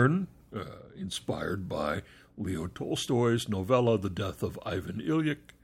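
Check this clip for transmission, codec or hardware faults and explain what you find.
Nothing stood out on listening to this speech recording.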